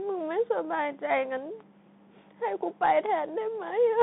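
From start to finish the speech carries the Bluetooth CVSD headset codec. The band runs from about 150 Hz to 3.6 kHz, with nothing above 3.8 kHz, which fits a 64 kbps CVSD link. CVSD codes each sample as a single up-or-down bit with an adapting step, so loud high-frequency sounds outrun the step and distort. The damage is plainly audible: s sounds come out scratchy, and a granular hiss sits beneath the narrowband speech.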